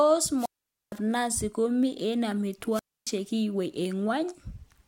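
Speech that cuts out twice: at 0.36 s and again at 2.71 s, a brief swell of hiss gives way to a hole of near silence before the voice returns, at 0.96 s and 3.10 s. The mutes last about 0.47 s and 0.28 s. This is wireless microphone squelch dropout: the analogue FM radio link fades, and once the received signal falls too low, the receiver's squelch shuts the output off until the signal recovers.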